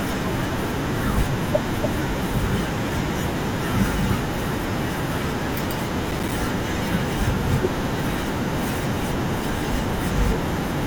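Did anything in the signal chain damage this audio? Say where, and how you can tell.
Yes, at the driver and buffer stage. From 6.11 to 6.32 s the processor fell behind and missed several audio buffer deadlines in a row, a handful of them over about a fifth of a second. Each missed buffer was output as silence, so the speech is chopped by tiny dropouts a few milliseconds long with hard edges. This is heard as a short burst of gritty processor overload crackle that stops once the load clears.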